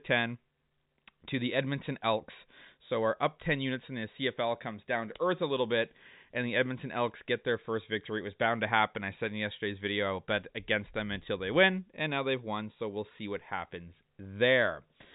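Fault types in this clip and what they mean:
No faults present.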